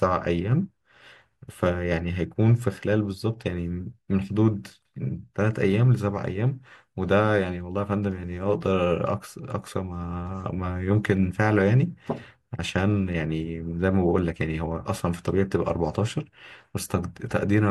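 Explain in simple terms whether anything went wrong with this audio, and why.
Nothing went wrong here.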